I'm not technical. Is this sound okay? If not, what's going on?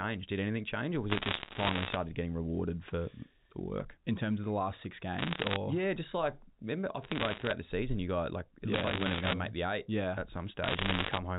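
No. Bit errors on a digital phone line crackle through the speech at 1.1 to 1.96, 5.19 to 5.56, 7.03 to 7.52, 8.74 to 9.34 and 10.64 to 11.18 seconds. Corrupted bits each spoil single sound samples, producing sharp ticks over the telephone-quality speech.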